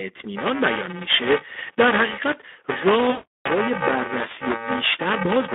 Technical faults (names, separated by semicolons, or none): Speex codec; VoIP packet loss concealed by the speech codec